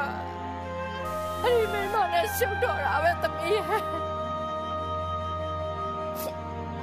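From 1.05 to 1.96 s the audio turns grainy. A grainy distortion rides on everything in that stretch, then clears. This is a stuck bit. The likely cause is one data bit held fixed by a broken line or converter. Roughly half the sample values then land off by that bit's weight. The error follows the waveform, and with a low bit it sounds grainy rather than buzzy. The step is small, around -45 dBFS, pointing to a fairly low bit.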